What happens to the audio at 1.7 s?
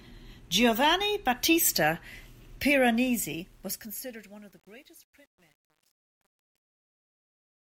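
Nothing goes wrong at 1.7 s; the speech there is intact, with no dropout, click or other disturbance.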